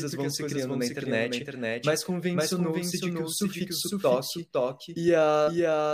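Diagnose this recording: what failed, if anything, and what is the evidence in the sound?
A second, slower capture path, or an edit holding two out-of-step copies, is the likely cause of this doubled audio track: the speech is mixed in twice throughout. A full-band copy trails about half a second behind, roughly 5 dB quieter, with no decay or room colour.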